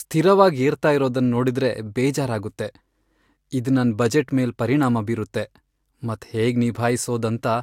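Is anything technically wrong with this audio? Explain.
No, nothing technically wrong can be heard here.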